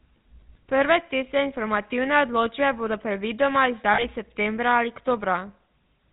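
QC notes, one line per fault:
throughout — GSM full-rate codec: the speech carries a buzzy, gravelly roughness and nothing above 4 kHz, which fits a 13 kbps full-rate stream. The codec models the vocal tract and drives it with a sparse, regularly spaced pulse excitation, so fine detail is discarded. The damage is plainly audible.
3.94–4.04 s — lost GSM frames: right after "informativne odločbe bodo predvidoma" and before "septembra ali", the sound freezes into a brief rough, metallic ring. To fill about 40 ms of missing data, the decoder repeats the last good frame's settings, which fits two dropped frames.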